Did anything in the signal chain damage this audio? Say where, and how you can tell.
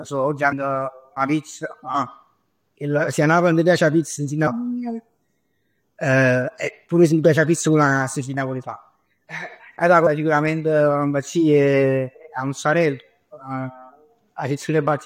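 Yes: compressed frames skipped at the codec stage, with smeared blips at 0.51, 4.46 (after "'a pizz nun si") and 10.06 s. The speech jumps ahead by several 23.2 ms frames, with overlap softening the joins, unlike a buffer dropout's hard click.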